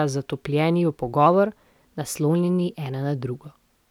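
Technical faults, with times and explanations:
1.26–3.15 s, drift correction step: just after "zatopljeni v" the speech runs about 5.9% fast and rises nearly 100 cents, a semitone, then snaps back. This is likely a clock-matching resampler changing its playback rate in one jump to rebalance its buffer.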